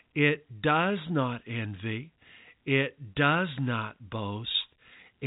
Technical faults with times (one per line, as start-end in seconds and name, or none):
4.52-4.54 packet loss with pitch repetition